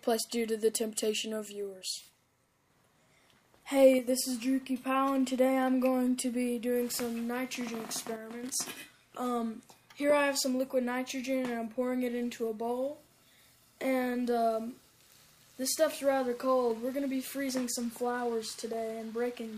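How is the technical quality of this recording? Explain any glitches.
Two short, abrupt level dips stand out. One channel drops out from 3.99 to 4.07 s and again from 8.16 to 8.44 s. The sound suddenly falls by about 6 dB, likely because one stereo side briefly vanished, halving the shared content once summed to mono.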